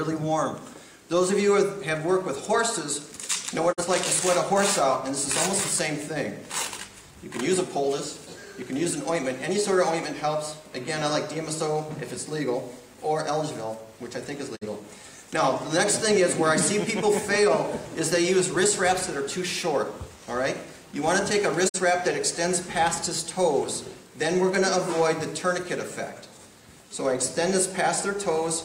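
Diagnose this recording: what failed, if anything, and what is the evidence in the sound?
Digital broadcast dropout at the receiver: short fade-outs to silence at 3.71, 14.55 and 21.68 s, each about 0.11 s, fitting one muted, corrupted frame.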